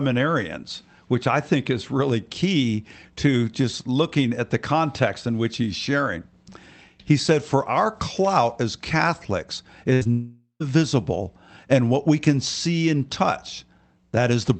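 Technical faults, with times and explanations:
9.93–10.03 s, burst of packet loss: about 80 ms of consecutive audio went missing. The receiver stretched and faded the last sound, then resumed further on.
10.03–10.07 s, short concealed packet loss: about 20 ms never arrived in time. It was patched by continuing the preceding sound, which is heard as a brief smear that blends back.
10.11–10.62 s, long network dropout: about half a second of audio, likely lost to a network stall. Concealment fades into roughly a tenth of a second of silence before "visible and what we".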